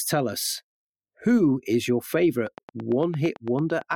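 From 2.47 s to 3.94 s, just after "who is your", a train of clicks runs over the speech. The clicks are evenly spaced, about 8.9 per second, roughly fifteen in all. They peak about 5 dB above the speech. Likely cause: electrical interference or a faulty connection.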